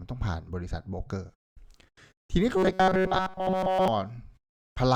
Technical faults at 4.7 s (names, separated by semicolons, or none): none